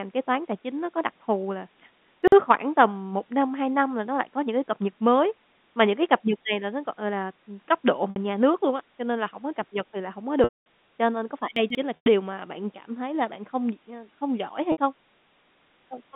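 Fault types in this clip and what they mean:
Chunks out of order: Short slices of about 46 ms play late and out of sequence. This jumbles the sound at 2.23 s, after "có đặc thù là", and at 11.56 s.
Packet loss with pitch repetition: Lost audio is bridged by repeating the last pitch period. This makes buzzy held sounds at 8.1 and 14.72 s, and the longer losses at 10.44 and 11.96 s fade out, the longest lasting 220 ms.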